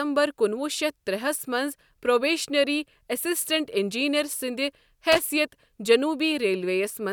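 At 5.12 s, lasting to 5.19 s, the speech is interrupted by loose connector crackle: a worn or dirty contact briefly opens and closes, chopping the signal, heard as a short, irregular burst of scratchy crackle.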